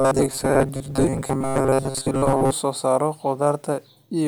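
From the start at 0.01 s until 2.52 s, the speech takes on robotic sound from repeated short buffers: a rigid, metallic buzz pitched at 134 Hz that loosely tracks the words. The likely cause is audio arriving too slowly, with playback filling the gaps by looping the most recent fragment, roughly 7.5 ms long, for most of the stretch. The genuine signal is skipped during those loops, and the fixed repetition rate imposes that steady buzz.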